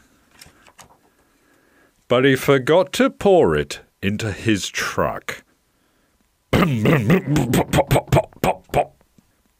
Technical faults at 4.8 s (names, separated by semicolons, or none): crude rate conversion